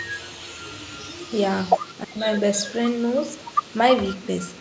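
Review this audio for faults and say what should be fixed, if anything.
Echo leak from 0.73 to 1.36 s and from 1.67 to 1.95 s. A faint delayed copy trails the speech by 320 ms, about 20 to 25 dB down. Likely a loudspeaker echo the canceller missed.

Speech suppressed in double talk from 2.03 to 2.26 s. The speech drops sharply, by roughly 40 dB, for about 200 ms. Likely the canceller could not tell its own talker from the loudspeaker echo and turned both down.

Prevent both by using a headset or improving the echo canceller's adaptation and double-talk detection.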